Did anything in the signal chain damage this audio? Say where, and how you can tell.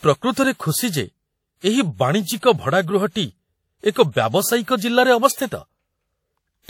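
Yes, at the codec stage, and it runs through the whole speech clip. There's a ringing, washy smear and a hiss that swells and fades with the speech, even though the top end reaches all the way to 19.8 kHz. That points to WMA compression, likely an early WMA 1 encoder. Its long transform blocks spread quantisation noise over tens of milliseconds, and the plainly audible damage fits a bitrate around 48 kbps.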